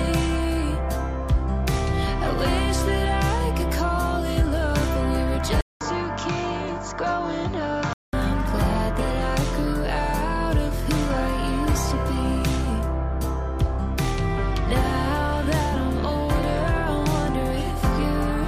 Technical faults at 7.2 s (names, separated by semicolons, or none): input switched to a poorer device